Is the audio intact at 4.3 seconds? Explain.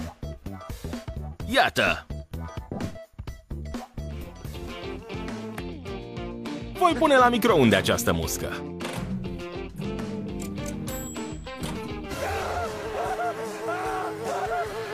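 Yes, at 4.3 seconds the audio is intact, with no dropout, glitch or other fault to be heard at that point.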